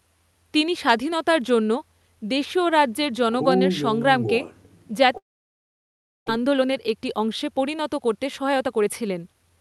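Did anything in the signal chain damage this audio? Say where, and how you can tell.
Yes. At the network stage, packets likely stopped arriving from 5.17 to 6.30 s, a long network dropout. The receiver's fill carries the last sound into a fading buzz or hiss, then roughly a second of silence follows, and the audio resumes with about 0.6 s lost.

After the gap, the jitter buffer holds about half a second too much audio. From 6.38 to 9.57 s it trims pitch-period-sized slices repeatedly, a jitter buffer speed-up. The sound plays at 113% speed with unchanged pitch and seems hurried, shedding around 0.4 s in total.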